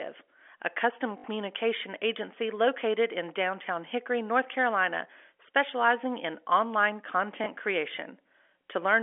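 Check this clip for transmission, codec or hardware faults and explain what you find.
Two dropouts show up as packet loss with the last packet repeated, on a G.711 telephone-band line. At 1.18 s, after "a custom", 60 ms repeats, fitting three 20 ms packets. At 7.44 s, after "specializing in online", 20 ms repeats. The receiver replays stale audio out of step with the pitch. The first gives a buzzy robotic stutter at about 50 Hz, the second a small blip.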